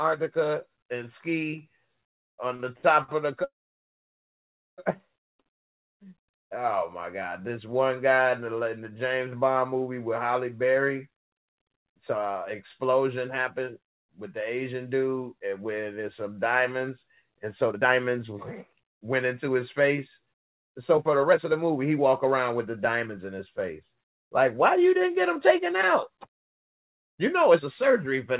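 The audio comes over a call path whose narrowband coding leaves nothing above 4 kHz. Three brief short stalls from a late packet occur at 2.56, 2.77 and 3.03 s, each holding the current sound for about 32, 57 and 52 ms with a slight buzz or dip before resuming exactly where it left off. Unlike a freeze, these are too short to fade to silence. At 3.44 s a call audio freeze begins: the sound is drawn out into a fading buzz or hiss and then stays silent for about 1.27 s until 4.80 s, when playback picks up from the same point. That long silence separates it from the short stalls, and packets held up in transit that drained the jitter buffer are the likely cause. Two stretches of jitter buffer speed-up follow: from 11.42 to 14.55 s the audio plays at 106% speed, trimming roughly a fifth of a second, and from 17.69 to 28.31 s it plays at 108%, trimming around a second, by cutting short pitch-period slices to work off built-up delay. 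These stretches sound hurried at unchanged pitch, with no held or frozen sound.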